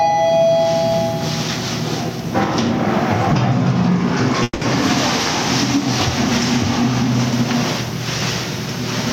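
From the start and throughout, the clip has gain pumping. The gain appears to be set far too high for the microphone, with a fast limiter or compressor likely clamping it down on each loud sound. The gain swings by something like 15 dB. The dynamics sound flattened. On a waveform the peaks sit at a nearly uniform ceiling while the quiet stretches bulge upward.

At 4.43 s a call audio freeze interrupts the sound until 4.63 s. The likely cause is delayed packets draining the jitter buffer. The receiver carries on the last sound as a fading buzz for about 180 ms, the last 30 ms or so of it near silence, before the audio resumes where it stopped. Nothing is lost, but everything afterwards runs about 180 ms late. A spectrogram shows a smeared, static band decaying into a brief blank. The waveform shows a repetitive, shrinking texture and then a flat line.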